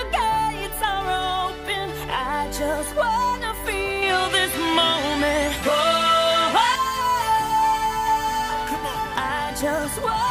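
From 4.02 to 6.76 s the sound turns duller, with nothing above 12.7 kHz, a modest level shift and a faint new noise floor, with no gap at either edge; likely an input switched to a poorer device. Spectrograms show a flat ceiling, waveforms a height step.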